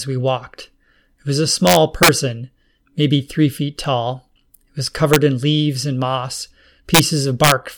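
From 1.67 to 2.09 s the speech is driven about 5 dB past full scale, and integer overflow wraps each peak to the opposite extreme, giving violent cracks. Shorter bursts follow at 5.14 to 5.16 s and 6.95 to 6.99 s, about 2 dB over, and 7.44 to 7.52 s, about 4 dB over. Clipping would flatten peaks into a buzzy fuzz. Here the waveform jumps across the whole range, so each crack is far sharper.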